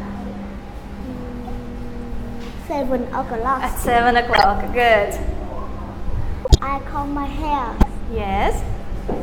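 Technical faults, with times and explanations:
1.47–1.50 s, 2.82 s, 4.33–4.45 s, 6.45–6.60 s and 7.79–7.86 s: corrupt frame decoded. At each point, damaged bits in a few compressed frames were played instead of concealed, so misread codes and gains spray energy into the wrong frequency bands for the length of those frames. This produces short chirps or noise bursts. The first two peak near about −20 and −15 dBFS. The last three are longer and reach about 0 dBFS.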